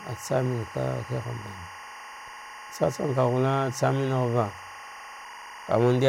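A speech recording carries timecode bleed from start to finish: a steady chirping warble sits roughly 15 dB below the speech, produced by linear timecode leaking in from an adjacent track or cable. The code's square wave flips between two pitches near 1 kHz and 2 kHz, and its pattern repeats at 24 frames per second. On a spectrogram this appears as two unbroken horizontal bands at those frequencies running beneath the speech energy for the whole clip.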